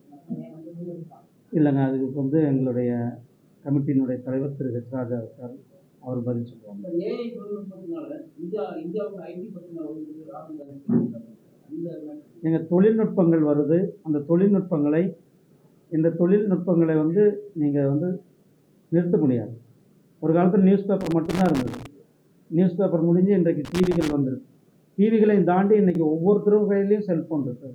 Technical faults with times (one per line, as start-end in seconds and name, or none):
10.62-10.69 one channel drops out
21.01-21.86 loose connector crackle
23.65-24.13 loose connector crackle
25.90-25.95 one channel drops out